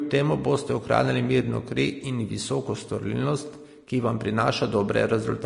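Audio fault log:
Throughout: Vorbis compression. Nothing in the speech reaches above 10.6 kHz, and the remaining treble is grainy and hissy, with roughened tones and smeared onsets, likely from coarse Vorbis quantisation near 40 kbps. A plain low-pass would cut cleanly without that noise-like grain.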